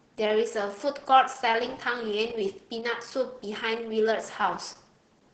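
Opus voice compression runs from start to finish. The speech has lost everything above 8 kHz, and its excitation is coded coarsely by the SILK linear-prediction mode, which fits a bitrate near 10 kbps. Voices sound heavily muffled, hoarse and faintly robotic.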